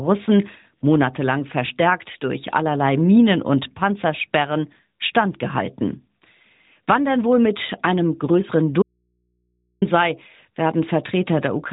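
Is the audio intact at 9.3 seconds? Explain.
No. An audio dropout to a faint residue runs from 8.82 to 9.82 s, losing about 1 s of speech. The signal likely broke while the path stayed live. The gap holds only mains hum, about 50 dB below the speech. It starts and ends abruptly.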